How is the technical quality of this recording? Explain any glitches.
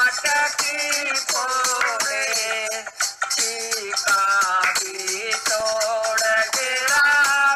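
One glitch affects the recording. From 5.48 to 5.84 s there are CD scratch ticks: four brief clicks, the longest about 1.5 ms, where a disc blemish exceeded error correction once per revolution.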